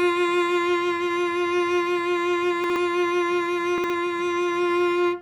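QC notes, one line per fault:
2.64–2.76 s and 3.78–3.90 s, chunks out of order: a brief jumbled moment in the music. Each time, one 60 ms chunk plays a chunk late, after its successor, leaving three hard joins.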